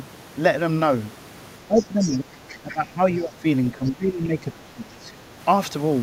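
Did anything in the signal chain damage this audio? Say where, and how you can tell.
Yes, in the call processing stage. The talker's speech is pulled down in four stretches: 1.62 to 2.42 s, 2.6 to 3.0 s, 3.18 to 3.45 s, and 3.74 to 5.35 s. The level sags by about 10 to 15 dB at its deepest and recovers between dips. This is likely speech suppressed in double talk. With both ends talking, the echo canceller could not separate the local voice from loudspeaker echo, so it attenuated everything.

Overlapping those stretches, the other side's voice leaks through faintly, from 1.76 to 2.17 s at about 15 dB below the main speech and from 2.49 to 2.74 s at about 20 dB below. It is a weaker second voice sitting under the talker, not a reverberant tail. The likely cause is that the echo canceller did not fully cancel the far-end signal the microphone picked up from the loudspeaker. The residue passed into the outgoing audio.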